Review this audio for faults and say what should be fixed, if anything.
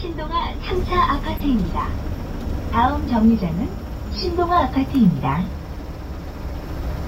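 At 1.37 to 1.46 s there's a corrupt frame decoded: a short glitch lasting roughly 90 ms and peaking fairly loud, around -15 dBFS. Bits inside the compressed stream got flipped, and the decoder played the damaged data anyway, so misread gains and codes throw energy into the wrong frequencies. The length suggests a handful of consecutive frames, something like four, were hit. To prevent it, add checksums on the transport and have the decoder conceal or drop frames that fail them.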